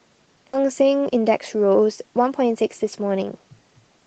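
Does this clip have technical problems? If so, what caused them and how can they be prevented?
Yes. At about 0.53 to 0.64 s there is a skip ahead. Roughly 400 ms of speech was dropped while later audio waited, so the two sides are joined almost directly. A larger jitter buffer or better network handling would prevent it.

Jitter buffer speed-up occurs at 1.09 to 1.39 s (119% speed) and 2.55 to 2.85 s (111%). Short pitch-period pieces were cut out to shrink a backlog, so speech sounds hurried. Steadier packet delivery would prevent it.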